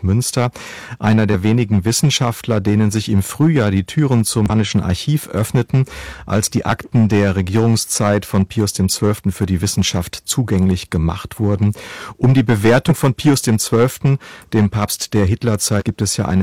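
A harsh fuzz rides every loud syllable of the speech from start to finish: hard clipping, with the signal overdriven by about 12 dB so a few percent of its peaks are sliced flat. Short glitches occur at 1.30, 4.46, 6.44, 12.86 and 15.77 s, each 40 to 70 ms long. These come from damaged data in a compressed stream, where the decoder misreads corrupted frames and resynchronises further on.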